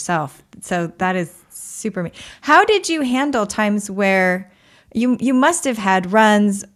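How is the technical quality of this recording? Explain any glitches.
No glitches or technical faults can be heard here.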